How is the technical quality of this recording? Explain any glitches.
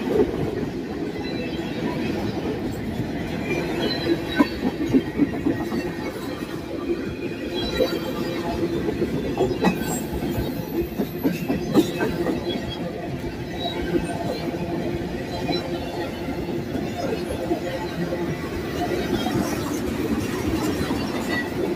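No glitches to report; nothing audible in the recording needs explaining.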